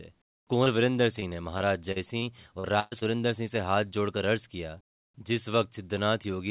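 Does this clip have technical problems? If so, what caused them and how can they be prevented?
Yes. The speech in this clip has three kinds of packet-loss damage, all heard through a narrowband call path that carries nothing above 4 kHz.

Short concealed packet loss occurs at 0.64–0.68 s, 2.60–2.66 s and 2.99–3.03 s, each hiding about 20 to 40 ms of missing audio. The receiver extended the preceding sound across each hole and blended back in, leaving a quick smear or wobble rather than an audible gap. Unlike the robotic stretch, each is a single isolated patch. Better network conditions or a slightly deeper jitter buffer would prevent these.

Repeated packet loss (robotic sound) runs from 1.20 to 2.24 s. Four separate gaps, the longest about 41 ms, were each filled by continuing the last sound, and about 11 percent of that stretch is concealed. Because the patches follow one another closely, the sound turns choppy with pieces missing instead of showing one brief blemish, which separates it from the isolated short losses. 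Stabilising the connection, for example by moving off congested Wi-Fi, and adding forward error correction would prevent it.

A burst of packet loss spans 2.80–2.93 s, with about 120 ms of audio missing. The receiver held the last sound and let it fade rather than going silent, so a buzz or hiss stands in for the lost stretch and the speech resumes further on. It differs from the short losses by its length, and from the robotic stretch by being one continuous gap. Redundant packet coding would prevent it.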